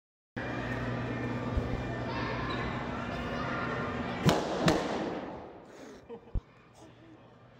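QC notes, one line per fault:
1.57 to 1.77 s, loud pop: two sharp pops in quick succession, about 15 dB above the sound, which carries on underneath. A likely voltage step from a plug, switch or static.
6.35 to 6.39 s, loud pop: one brief pop, about 15 dB above the sound. Likely a single voltage pulse, shaped by the downstream circuitry.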